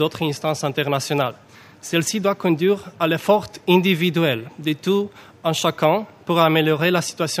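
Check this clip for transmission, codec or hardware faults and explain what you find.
One hardware fault is present. Clock slip clicks run from 0.12 to 7.38 s: one-sample slips roughly every 30 ms, likely from unsynchronised clocks about 700 ppm apart, producing a soft rattle.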